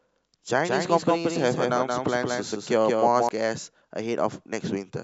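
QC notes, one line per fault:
0.65–3.29 s, doubled audio track: a dry full-band copy trails about 200 ms, roughly 5 dB quieter, likely from a second capture path; the spectrogram shows every onset repeated without decay.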